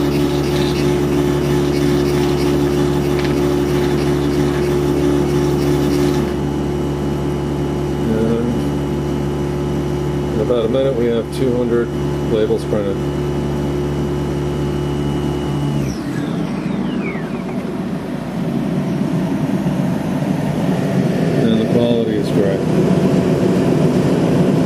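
No technical faults can be heard anywhere in the recording, and the signal holds steady throughout with no interruption or damage to report.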